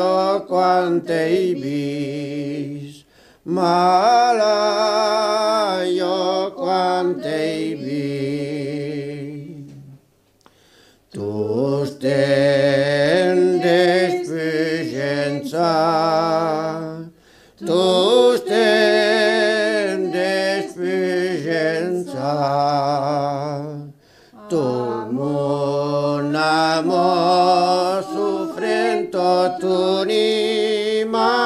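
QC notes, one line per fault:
No faults heard anywhere in the audio.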